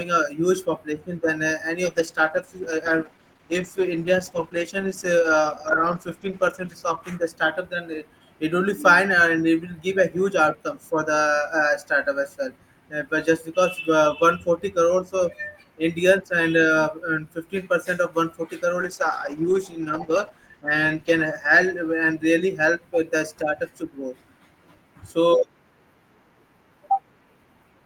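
The speech turns rough and muffled from 1.86 to 7.81 s and again from 18.81 to 23.65 s, with the dullest stretches lasting about 4.9 s and 2.0 s. These are call bitrate drops: the encoder starved of bits, consistent with roughly 40 falling to 13 kbps, and trimmed the highs.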